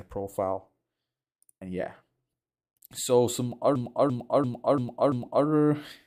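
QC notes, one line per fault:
3.76–5.46 s, system hang loop: the output froze and the hardware kept replaying the same stretch of about 341 ms, five times over at roughly 2.9 Hz, which fits a 16384-sample buffer. That slow repeat is the skipping-record sound you hear.
5.25 s, lost LE Audio frames: a 15 ms gap, likely a couple of dropped Bluetooth frames, where the LC3 decoder refilled the hole by reusing the previous spectrum with randomised signs, so that instant turns into a brief noisy smear.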